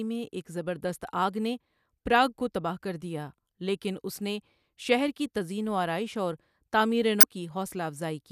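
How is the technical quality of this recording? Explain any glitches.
One glitch mars the recording, near the end. From 7.20 to 7.23 s there is damaged data in the compressed stream: a short run of bytes in the encoded file was corrupted, so the decoder could not read the frames there correctly, lost its place and had to hunt for the next valid frame header before resuming. That appears in the speech as a brief chirp or blip lasting about 30 ms.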